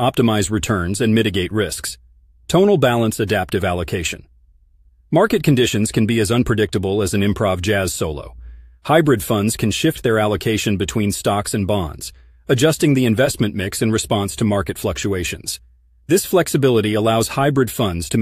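No faults are audible anywhere in the recording.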